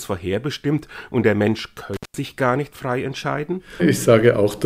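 From 1.94 to 2.17 s an intermittent contact opens for about 174 ms: sound drops out between crackles, showing as broadband spikes framing a near-empty spectrogram gap.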